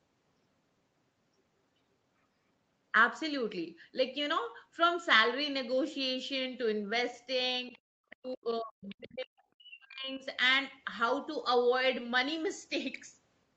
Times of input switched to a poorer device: none

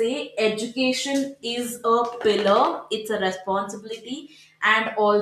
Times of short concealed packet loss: none

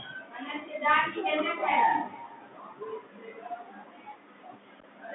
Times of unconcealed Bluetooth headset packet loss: 4.80-4.85

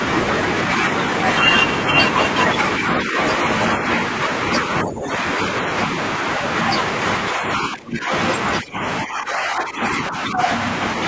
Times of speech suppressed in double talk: 3.04-3.17, 4.83-5.11, 7.31-8.11, 8.61-10.49

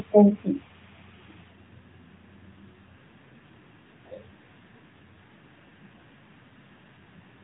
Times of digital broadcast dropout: none

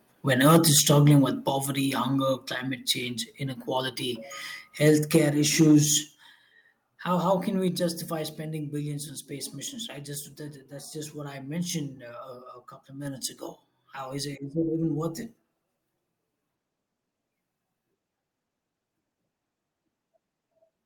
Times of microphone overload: 0.41-1.19

